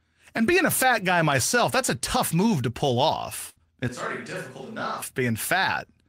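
At 3.49 s, just after "tough move to pull", a burst of packet loss left the receiver with no audio for about 0.1 s, so it stretched the last sound for about 66 ms while fading it, then jumped ahead, dropping roughly 60 ms of speech outright.

From 3.88 to 5.02 s, the close microphone likely dropped out and a distant microphone took over. The speech turns abruptly hollow and roomy, loses bass, falls roughly 10 dB, and carries background noise roughly 30 dB below the speech, before snapping back.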